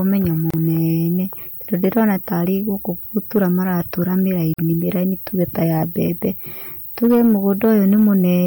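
Gap at a join of encoded pieces at 0.50 to 0.54 s: the speech drops into a 32 ms silence with abrupt, slightly smeared edges, then resumes where it stopped. Separately encoded sections were joined without trimming the encoder's start-up delay and final-frame padding, so that silence remained in the file.

Hard clipping from 1.73 to 2.11 s, just before "tarĩ gũkũ": the speech overloads by about 3 dB, so its peaks are cut flat. The flattened tops add high harmonics, heard as crackle on the loudest moments.

Hard clipping at 3.17 to 3.44 s, right after "tarĩ gũkũ": the same crackle, again at about 3 dB of overdrive.

Gap at a join of encoded pieces at 4.54 to 4.59 s: a 49 ms silence, four seconds after the first one, which fits pieces joined at a steady 4 s spacing.

Hard clipping at 6.02 to 6.27 s: a lighter overload of about 1 dB, heard as crackle on the peaks.

Hard clipping from 7.03 to 8.35 s: the heaviest and longest overload, about 5 dB. 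The flattened peaks crackle on the loud speech.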